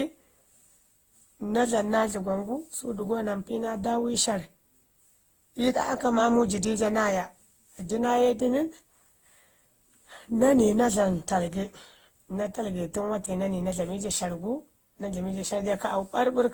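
Speech, likely passed through repeated lossy Opus encoding at around 48 kbit/s, perhaps seven times over, causing generation loss: swirly, hollow, smeared sound with blurred attacks throughout.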